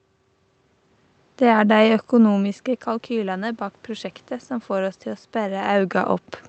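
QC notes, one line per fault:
2.31–6.02 s, automatic gain rising: the speech drops by about 12 dB as the talker moves away around 2 s. The gain control then climbs slowly, by about 6 dB. Voice and room noise swell together, so the background rises with the speech.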